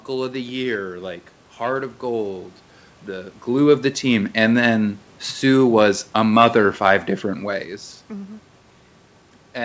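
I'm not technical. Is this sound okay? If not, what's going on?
Yes, this sound is okay; nothing is wrong.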